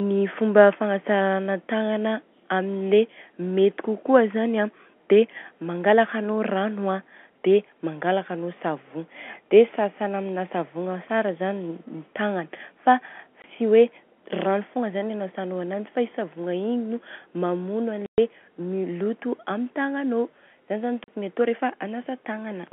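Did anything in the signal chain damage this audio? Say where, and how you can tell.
Yes. Packet loss filled with silence, at the network stage: hard-edged dropouts at 13.42–13.44 s (20 ms), 18.06–18.18 s (120 ms) and 21.04–21.08 s (40 ms). All are multiples of 20 ms, which fits lost 20 ms packets replaced by silence in the G.711 telephone stream.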